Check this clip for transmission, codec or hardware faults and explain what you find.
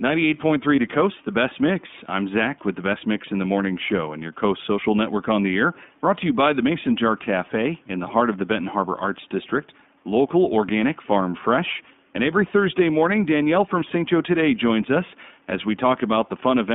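Two faults are present: iLBC codec coding throughout, and one lost iLBC frame near the start.

The speech passes through the iLBC codec, which codes each 20 ms frame independently and whose artefacts fit its 15.2 kbps mode. The line is limited to about 150 Hz to 3.6 kHz, so the speech sounds thin and plainly rough and synthetic, with the faint room noise about 38 dB below it.

From 0.76 to 0.79 s, one 20 ms iLBC frame was lost. The decoder filled the gap by repeating the last pitch cycle blended with noise, producing a brief buzzy, held vowel. Because each frame stands alone, the voice is right again almost at once afterwards.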